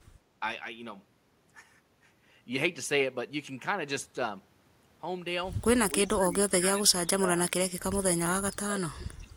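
From 5.9 to 7.52 s and again from 8.55 to 9.33 s, the speech drops by up to about 25 dB and breaks up in patches. It sounds like speech suppressed in double talk, likely an echo canceller ducking its own talker during overlap.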